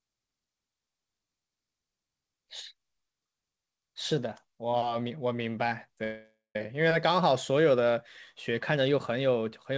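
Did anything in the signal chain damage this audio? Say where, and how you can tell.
Yes, a call audio freeze from 6.04 to 6.56 s, most likely the network starving the jitter buffer: the last sound stretches into a fading buzz, then about 140 ms of silence. Unlike a dropout, the speech resumes exactly where it stopped, arriving about 0.51 s late.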